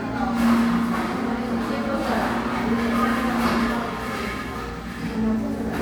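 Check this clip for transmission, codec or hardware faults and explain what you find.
One codec fault runs through the whole clip: generation loss. The sound has a swirling, hollow quality with smeared attacks. This is likely the result of repeated MP3 encoding, and the character fits about four passes at 128 kbit/s. Each decode and re-encode quantises again on a shifted frame grid, so noise and spectral holes pile up. A single low-bitrate encode would give cleaner transients and less cumulative swirl than this clip shows.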